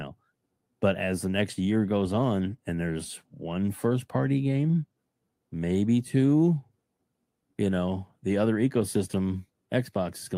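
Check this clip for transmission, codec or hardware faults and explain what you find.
No transmission, codec or hardware fault can be heard anywhere in this speech recording, and the signal stays continuous and stable throughout.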